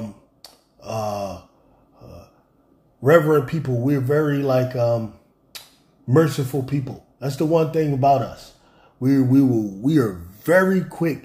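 No technical faults can be heard anywhere.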